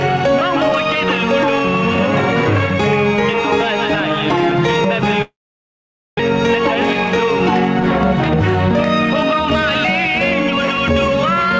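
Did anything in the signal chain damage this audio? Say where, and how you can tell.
Yes, at the network and jitter-buffer stage. From 5.22 to 6.21 s the sound is extended as a buzzy, fading smear that gives way to near silence for about 0.85 s. It then resumes with roughly 0.6 s of material skipped. This is a long network dropout, with the receiver concealing lost packets, likely after a delay jump of around 0.4 s. A plain mute or edit gap would not carry that synthetic decaying tail, and it would not resume later in the content.

The second stage is jitter buffer speed-up, with the buffer holding more audio than its target. From 7.83 to 8.70 s the audio runs at 118% speed, shedding roughly 0.15 s. From 9.14 to 10.78 s it runs at 105%, shedding about 0.1 s. Pitch stays put because whole pitch periods are cut out repeatedly. That separates it from clock drift or resampling, which would shift pitch along with tempo. 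The G.722 call path leaves nothing above 8 kHz throughout.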